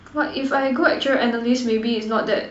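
No technical faults can be heard anywhere in this speech recording. Nothing in the signal chain gives any sign of going wrong at any point.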